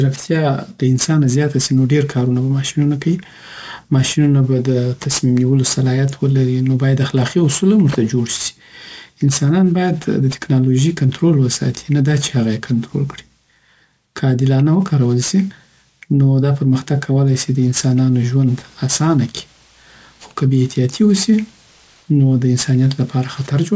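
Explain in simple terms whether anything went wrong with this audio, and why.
Hiss-like sounds such as s and sh come out gritty and metallic across the whole recording. This is aliasing: the audio was converted to a lower sample rate without first removing high frequencies, which fits a drop to 16 kHz, so anything above 8 kHz folded back down as false, harsh tones.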